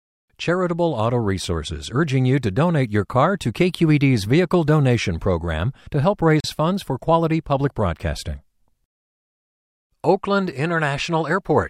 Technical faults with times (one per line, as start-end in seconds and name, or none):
6.40-6.44 Bluetooth stall